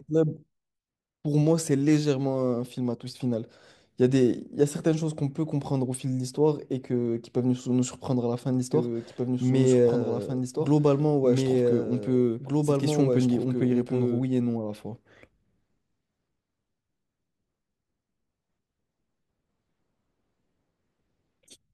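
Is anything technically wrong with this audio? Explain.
Yes. From 8.73 s to 14.21 s the speech carries a doubled audio track: a second, full-band copy of the same speech runs about two seconds behind the original, roughly 5 dB quieter. It has no reverb tail or room colouring and cuts in and out abruptly at those boundaries. The likely cause is the signal being captured twice, once through a slower path, or an edit leaving two offset copies layered together.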